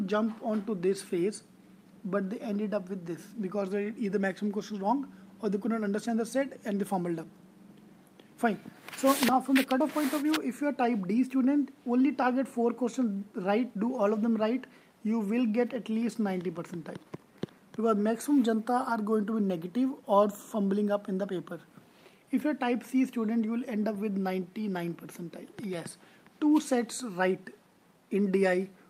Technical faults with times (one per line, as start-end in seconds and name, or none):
none